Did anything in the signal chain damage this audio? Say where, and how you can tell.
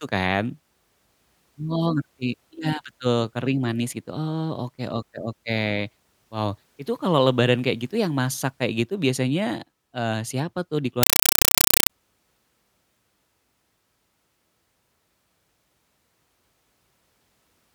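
Yes: at the playback link, a compressed stream was played as audio from 11.03 to 11.90 s. The receiver took an AC-3 bitstream as ordinary samples instead of decoding it, so the speech is replaced by very loud, chattering static. The chatter repeats at 31.25 Hz, each burst about 5.3 ms of noise followed by silence, which fits undecoded Dolby Digital frames carrying a 256 kbps stream.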